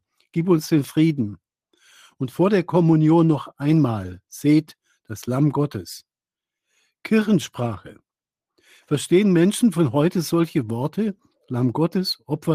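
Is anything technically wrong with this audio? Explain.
No, nothing technically wrong can be heard in this audio. There are no faults to point to at any moment in the clip.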